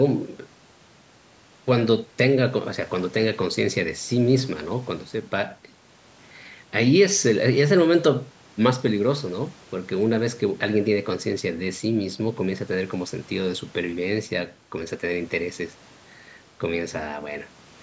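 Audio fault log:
The speech has passed through a call's microphone processing, which trims the lowest bass with its high-pass filter and leaves nothing above 8 kHz, and that is the normal behaviour of that path.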